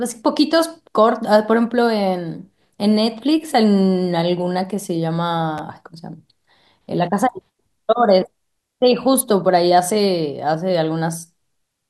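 At 5.58 to 5.60 s the speech has a repeated buffer: new audio arrived late, so the device replayed its last block twice more. Each 10 ms repeat, which fits a 10 ms buffer, ends in a hard join, giving a brief buzz. Essentially nothing is skipped.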